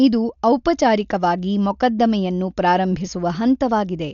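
Throughout, the speech sounds dull, with nothing above 6.9 kHz and a rough flutter around voiced tones. The heavy damage is likely Dolby Digital compression, fitting a bitrate near 48 kbps: the band is narrowed and starved frequency lines are filled with dither noise.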